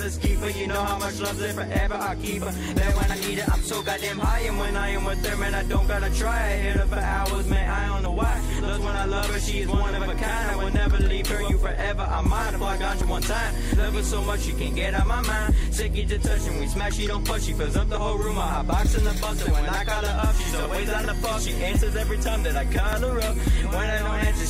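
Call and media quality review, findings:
Audio missing between chunks: five short skips at 3.10, 8.06, 13.02, 17.97 and 22.93 s, evenly spaced about every 5 s. Each drops roughly 40 ms, with the surrounding audio butted together and no silence in the gap. Likely cause: the recorder or processing stage handling audio in 5-second chunks and losing a fragment at each boundary while closing one chunk and opening the next.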